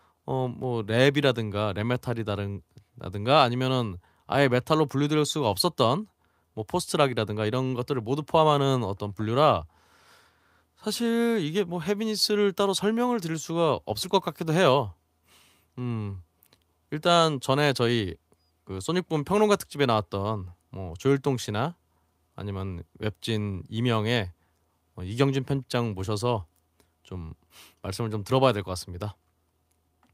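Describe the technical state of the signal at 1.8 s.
At 1.8 s the signal is intact, with no audible fault at that moment.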